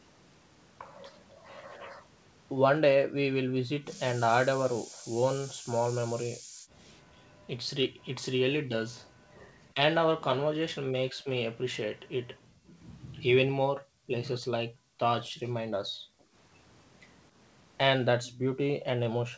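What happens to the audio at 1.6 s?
Nothing goes wrong at 1.6 s: the speech passes through intact, with only the ordinary band limit of the call path, which carries nothing above 8 kHz.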